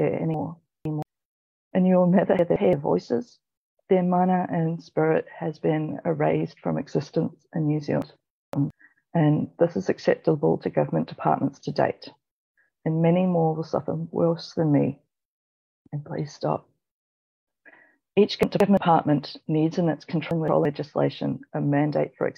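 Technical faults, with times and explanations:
0.34–1.02, 2.39–2.73, 8.02–8.70, 18.43–18.77 and 20.31–20.65 s, chunks out of order: a roughly 171 ms block plays late, three blocks behind in the first and third, one behind in the rest. That scrambles the sound briefly, with hard joins where the order breaks.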